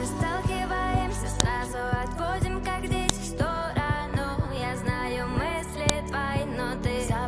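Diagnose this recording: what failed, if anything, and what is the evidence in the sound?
This looks like a file header played as audio, and it's a storage or file-assembly problem rather than anything analogue. You get a sharp, loud snap at 1.40, 3.09 and 5.89 seconds, each only a couple of milliseconds long, landing regardless of what the sound is doing. That points to separate WAV chunks being joined without stripping their headers, so the header bytes get read as sample values and fire off as a click at each seam.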